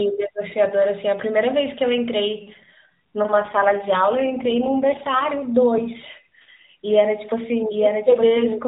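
Speech over an AMR narrowband mobile link, banded below 4 kHz; an AMR rate drop from 3.32 to 5.27 s makes it rougher and more synthetic, fitting 12.2 to 5.9 kbps, with no gap and unchanged bandwidth but smeared harmonics on a spectrogram.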